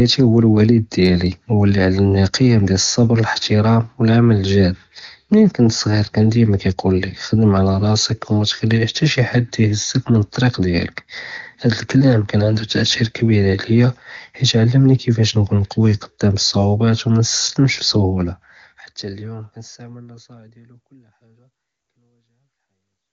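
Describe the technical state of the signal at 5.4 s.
At 5.4 s the speech is intact, with no fault audible at that moment.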